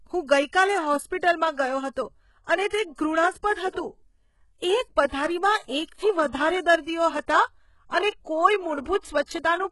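A speech clip passed through what is likely HE-AAC compression at a very low bitrate, in the region of 12 kbps, with heavy codec damage. Only the lower band is truly coded. The treble is rebuilt by copying lower bands upward under a coarse envelope, so upper harmonics don't line up with the real ones. The top end sounds synthetic, with gritty, lispy sibilants, and nothing is present above 11.5 kHz. The same block-based coding also produces pre-echo. At 2.68 s, 5.08 s and 9.24 s, quantisation noise sized for a sharp attack late in a block spreads into the quiet stretch before it. Each onset is preceded by a short hiss lasting about 44 ms, 46 ms and 54 ms respectively, and the attacks themselves sound softened and smeared.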